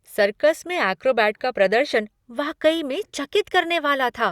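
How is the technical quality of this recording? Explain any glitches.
The technical quality of this recording is sound, with no glitches to explain.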